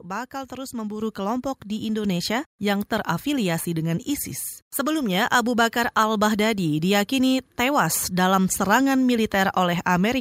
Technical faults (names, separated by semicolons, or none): microphone volume stepped up